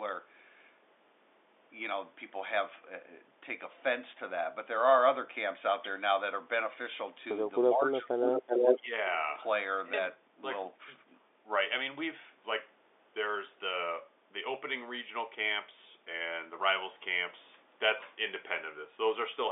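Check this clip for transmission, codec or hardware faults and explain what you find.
Two faults are audible in this speech clip, heard over a band-limited telephone line of roughly 300 Hz to 3.6 kHz, which fits G.711 mu-law coding.

Speech suppressed in double talk, 7.76–8.23 s and 8.75–8.92 s: the voice dips sharply, by about 30 dB and then about 15 dB. The likely cause is an echo canceller turning down both its own talker and the loudspeaker echo while the talkers overlap.

Echo leak, 8.24–8.79 s: a copy of the voice returns 379 ms late at about the same level as the speech, likely loudspeaker pickup the loudspeaker side's canceller failed to remove.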